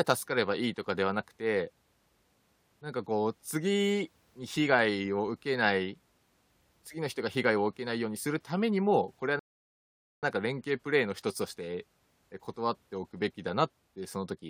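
Speech clip with a rebuffering stall. At 9.39 s the sound drops to silence. It resumes at 10.23 s, picking up exactly where it stopped. Nothing is skipped. The player ran out of downloaded audio and waited, adding 0.84 s.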